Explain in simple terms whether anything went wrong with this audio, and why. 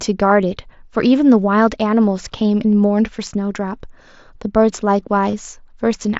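Concealed Bluetooth headset packet loss occurs at about 5.31 to 5.33 s. The headset link dropped about 23 ms of sound, which fits three lost packets, and the phone filled the gap by repeating recent sound, causing a brief buzz.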